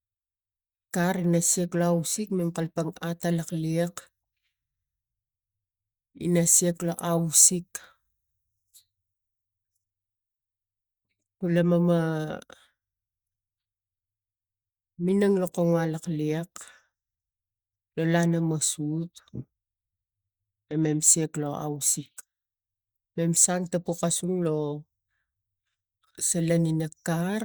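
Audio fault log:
Nothing to log here: I listened all the way through this speech and didn't hear a single problem.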